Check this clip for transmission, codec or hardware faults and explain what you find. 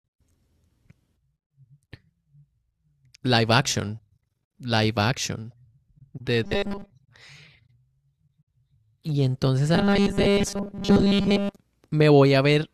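Robotic sound from repeated short buffers appears twice in the speech, from 6.44 to 6.92 s and from 9.75 to 11.57 s. Both times the voice becomes a rigid, metallic buzz at 200 Hz that only loosely follows the words. The likely cause is audio arriving too seldom, so the playback fills the gaps by looping a 5 ms slice and skips most of the real signal. On a spectrogram this shows as evenly spaced horizontal harmonics at multiples of 200 Hz. The waveform shows identical cycles repeating every 5 ms.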